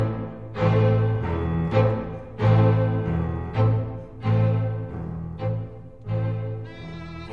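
No faults detected anywhere in the music.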